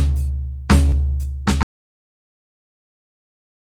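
At 0.89 s the music shows a short concealed packet loss lasting to 0.94 s. Around 20 ms of audio failed to reach the decoder in time, and the receiver bridged the gap by extending the preceding material for about 25 ms before crossfading back into the real signal. The result is a brief smear or wobble in the music.

From 1.63 s to the end of the clip, the music gives way to an audio dropout to silence. The signal stops abruptly and is replaced by silence, with no residual noise floor or room tone, and it does not return. This is most likely a lost input, such as a disconnected source or a failed link, while the recorder kept writing empty samples, so whatever was playing after that point is missing.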